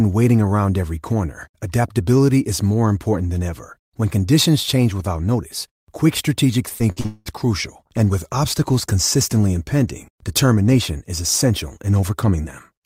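Repeated packet loss hits the stream from 6.69 to 7.28 s, just after "without notice quick strategic" and before "crucial and with obstacles". Data kept going missing or arriving too late, and each hole was patched by stretching the last received sound forward, covering about half of that 0.58 s span. The longest hole runs about 196 ms. The speech turns choppy, with pieces gone.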